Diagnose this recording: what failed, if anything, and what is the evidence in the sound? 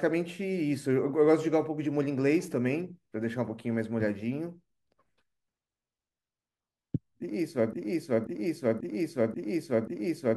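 Broken-record loop from 7.73 s to the end: one 0.54 s fragment repeats five times, showing as identical tiled spectrogram blocks, likely from a stalled playback buffer.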